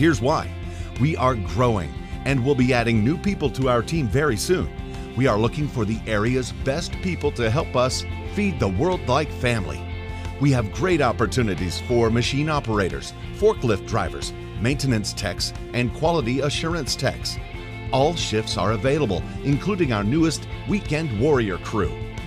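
Nothing here sounds out of place; I listened all the way along and didn't catch a single technical fault anywhere in the audio.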